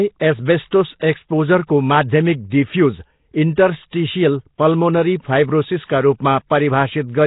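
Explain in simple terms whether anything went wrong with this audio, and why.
Yes, the speech sounds rough and watery from start to finish, with a hissy haze around it and nothing above 3.8 kHz. That points to Nellymoser compression, likely from an old Flash microphone codec. Unlike plain muffling, weak frequency bands turn into grainy noise.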